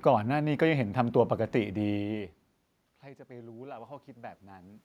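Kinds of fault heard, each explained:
Automatic gain rising: the input level dropped by about 22 dB, so the automatic gain control slowly raised its gain by about 5 dB between 3.27 and 4.79 s, lifting the speech and the room noise together in one gradual swell rather than a step.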